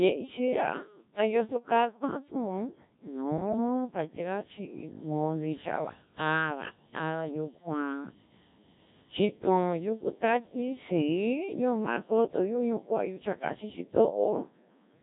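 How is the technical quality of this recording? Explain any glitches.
Poor: the speech sounds robotic and buzzy from start to finish, the heavy damage of a Codec 2 vocoder at a very low bitrate, consistent with around 1.3 kbit/s. Only pitch, voicing, energy and spectral shape survive, and the decoder rebuilds the speech from sine waves rather than keeping the real waveform.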